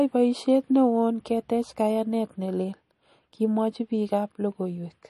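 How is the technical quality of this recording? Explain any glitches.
The technical quality is noticeably degraded. Throughout the speech, an audible watery swirl and a hard treble cutoff at 12.1 kHz point to likely MP3 compression at a low bitrate, around 40 kbps. A spectrogram shows a flat ceiling plus flickering gaps where weak frequency lines vanish between frames.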